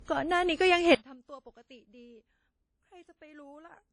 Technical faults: transcoding between lossy codecs; one channel inverted

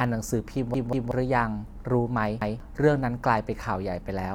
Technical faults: repeated buffer

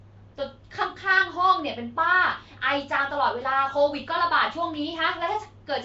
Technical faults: Nellymoser compression

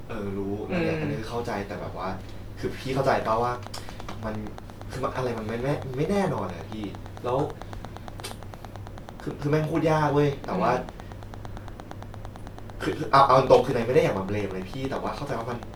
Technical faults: train of clicks

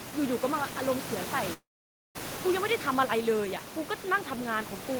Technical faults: long network dropout

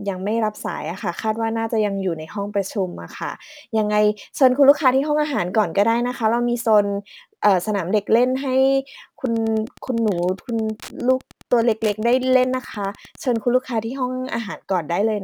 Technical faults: Wi-Fi interference

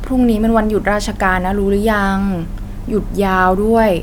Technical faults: none

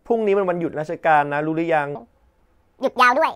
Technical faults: section at the wrong speed

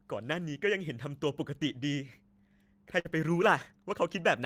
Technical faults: burst of packet loss

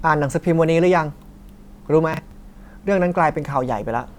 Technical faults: processor overload crackle

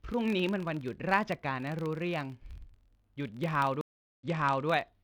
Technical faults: filter restarted on every block; stream reconnect

